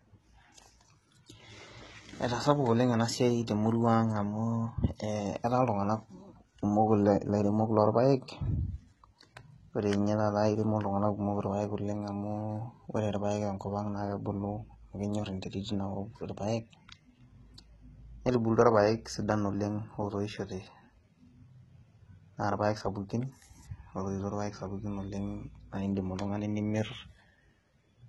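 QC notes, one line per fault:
throughout, HE-AAC compression: the encoding was likely HE-AAC at a very low rate, fitting about 16 kbps. The treble is rebuilt from copied lower bands instead of coded, so s sounds turn gritty and lispy, and nothing remains above 11.8 kHz.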